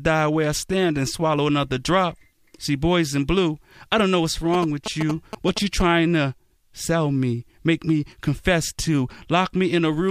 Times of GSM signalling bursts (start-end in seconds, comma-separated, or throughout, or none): 4.54-5.82